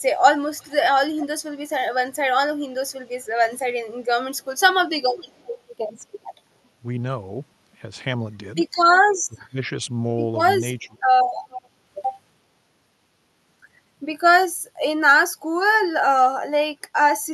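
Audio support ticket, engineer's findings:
Echo leak, five bursts: 0.57–0.73 s, 1.17–1.27 s, 1.73–1.83 s, 5.02–5.51 s, 11.50–11.68 s. Delayed copy of the speech trailing by 364 ms. Weakest about 35 dB below the speech (first and third bursts), strongest about 15 dB below at 11.5 s. Likely residual echo passed by the loudspeaker side's canceller. Spectrogram: faint ghost harmonics repeating the earlier formant pattern 364 ms later, under the 12 kHz ceiling of the Opus path. Waveform: low-level fragments.

Speech suppressed in double talk, 9.28–9.72 s and 10.79–10.96 s. Talker level pulled down while the other side speaks, deepest roughly 20 dB in the first dip and roughly 15 dB in the second, about half a second in total. Likely the echo canceller misreading the overlap and attenuating its own talker along with the echo. Waveform: envelope notched, short troughs. Spectrogram: whole band darkens over those spans.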